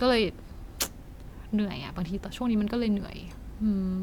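No technical faults can be heard in the speech.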